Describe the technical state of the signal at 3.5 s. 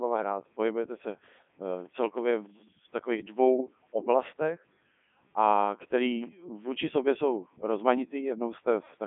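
Robotic and buzzy at 3.5 s, with nothing above 3.6 kHz and the band confined to roughly 200 Hz to 3.5 kHz. The Codec 2 vocoder runs throughout. At a rate consistent with 3.2 kbit/s, it sends only pitch, voicing, energy and envelope, then rebuilds the speech from sine waves, discarding the original waveform.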